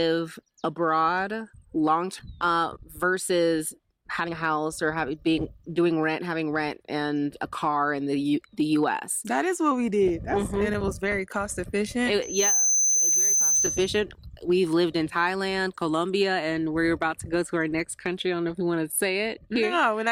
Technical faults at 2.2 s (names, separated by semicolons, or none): skip ahead